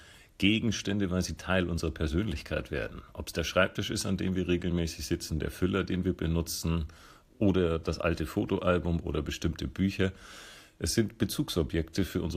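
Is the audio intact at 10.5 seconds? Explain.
No. From 10.51 to 10.54 s, about 30 ms, there are lost LE Audio frames, which fits three 10 ms LC3 frames going missing over Bluetooth. The decoder filled the gap by repeating the last good spectrum with randomised signs, so any tonal content briefly turns into a noisy smear. On a spectrogram, clean harmonic lines dissolve into a short smudge of diffuse energy. On the waveform, the periodic shape gives way to irregular, noise-like wiggles for that stretch.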